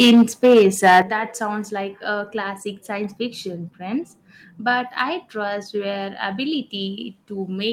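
From 0.0 to 1.0 s the microphone's input level was likely set too high, driving the speech about 7 dB past the converter's ceiling. This is microphone overload: roughly a sixth of the samples have their peaks sliced flat, so every louder syllable in that first second carries a harsh, crackling, buzzy edge instead of a rounded peak.

The call software likely reacted to that clipping by lowering the device's input volume in sudden steps, which is microphone volume stepped down. The first cut comes at 0.02 s, about 4 dB, not enough to stop the overload. A second, much larger cut of about 11 dB follows at 1.02 s, right as the distortion ends. At that point the speech and the background noise behind it fall together in one abrupt drop.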